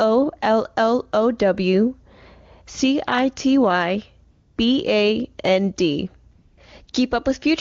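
At 4.31–4.57 s, 6.33–6.57 s, 6.85 s and 6.91 s, AMR comfort noise stands in for silent stretches: speech frames stop, and steady synthetic hiss switches in, showing as flat, featureless spectrogram patches.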